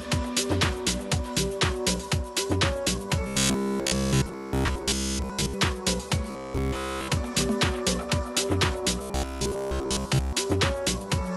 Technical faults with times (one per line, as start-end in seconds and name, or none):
3.27-5.55 robotic sound from repeated short buffers
6.31-7.08 robotic sound from repeated short buffers
9.02-10.33 robotic sound from repeated short buffers